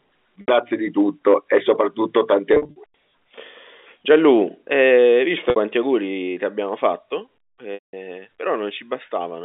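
Packet loss with pitch repetition hits at 0.41–0.48 s, 2.54–2.76 s (scattered gaps, longest 50 ms), 5.50–5.56 s and 7.74–7.93 s. The receiver loops the last pitch period, giving a held, buzzy tone that fades out in longer gaps. Spectrograms show frozen harmonics; waveforms show an identical repeating cycle decaying toward flat.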